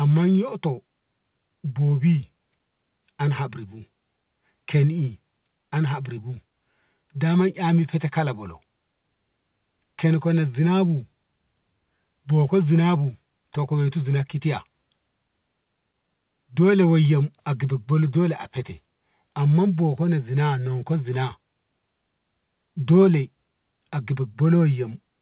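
No faults are audible in this speech; the band stops at 4 kHz, which fits a narrowband G.711 mu-law call path at 64 kbps working as intended.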